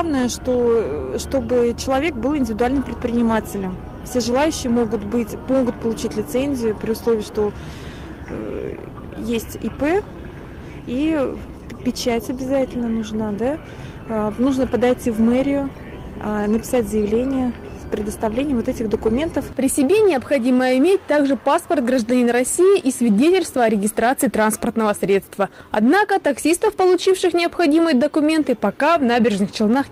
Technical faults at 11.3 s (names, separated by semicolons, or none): none